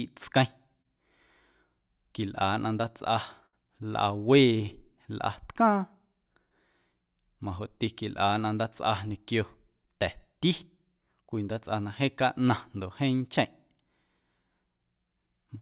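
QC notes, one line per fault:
0.82–0.86 s, short concealed packet loss: about 20 ms of audio never reached the decoder in time. The receiver bridged the hole by carrying the preceding sound forward for roughly 23 ms, then blended back into the real signal, leaving a brief smear or wobble.
3.46–3.54 s, burst of packet loss: about 60 ms of consecutive audio was lost. The receiver extended the last sound for about 61 ms while turning it down, so a held buzz or fading hiss stands in for the gap before the audio resumes further on.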